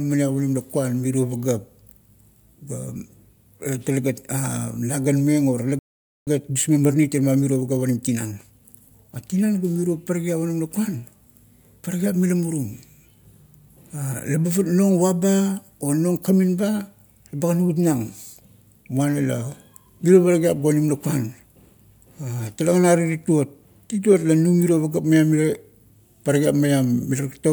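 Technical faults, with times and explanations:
5.79–6.27 s, playback stall: the speech halts mid-flow and the output is fully silent for about 0.48 s, then the speech resumes. The likely cause is the player running short of buffered data or its audio thread being held up briefly. Unlike a packet-loss dropout, which swaps a few milliseconds for a click or a concealment smear, this is a clean, sustained hole in the sound.
6.27–9.27 s, time-compressed catch-up: for three seconds after the stall the speech runs about 1.15 times faster as the player trims its backlog, cutting out tiny slices and cross-fading the joins. Pitch and timbre stay where they were, so the voice sounds hurried rather than higher. That unchanged pitch separates it from a sample-rate or clock mismatch, where speeding up would also raise the pitch.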